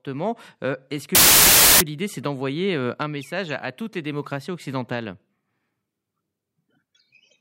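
This speech clip... no, must not start that way.

A speech recording with one fault: file tags played as audio. From 1.15 to 1.81 s, an embedded cover picture, stored as compressed data, is read as sample values, producing a hard-edged burst of very loud white noise that cuts abruptly in and out over the speech.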